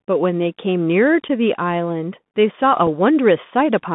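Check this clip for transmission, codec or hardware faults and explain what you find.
Two faults are present: the whole clip runs through a Bluetooth CVSD headset codec, and there are two brief moments of unconcealed Bluetooth headset packet loss.

Throughout, the Bluetooth CVSD headset codec limits the speech to roughly 150 Hz to 3.6 kHz, consistent with a 64 kbps CVSD link. Its one-bit delta coding cannot follow fast slopes, so sibilants turn scratchy under a granular hiss. A spectrogram shows a hard ceiling near 3.6 kHz with a speckled noise floor.

At 1.28 s, unconcealed Bluetooth headset packet loss drops about 11.2 ms, likely a few consecutive packets, and at 2.87 s about 3.8 ms, roughly one packet. Nothing fills the gaps, so each one is an abrupt-edged hole. The waveform shows a sudden flat notch, and the spectrogram a thin vertical gap.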